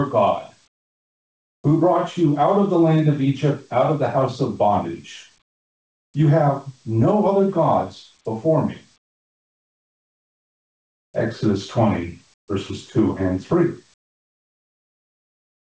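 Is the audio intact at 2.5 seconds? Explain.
No. At 2.5 seconds the audio shows gain pumping, which runs through the whole clip. The level swings by about 10 dB. Loud and soft parts sit unnaturally close, so the sound feels squashed. The likely cause is input gain set far too high, with a fast limiter or compressor clamping down on every peak. The call codec also leaves nothing above 8 kHz.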